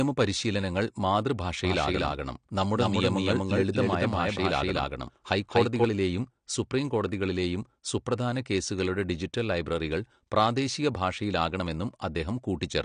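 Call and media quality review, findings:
Codec damage throughout, plainly audible. Band-limited: nothing above 9.8 kHz, so the top end sounds dull. Likely cause: AAC compression, AAC-LC at a low bitrate, consistent with about 32 kbps. Encoder quantises spectral lines coarsely and drops the upper band to save bits.

Doubled audio track, 1.65 s to 5.85 s. Second full-band copy trails by roughly a fifth of a second at about the same level. No decay, no room colour. Copy cuts in and out abruptly. Likely from a slower second capture path, or an edit holding two offset copies.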